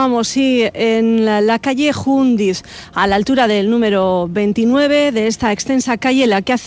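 Nothing stood out on listening, with the audio coming through a G.722 call path at 64 kbps that holds nothing above 8 kHz.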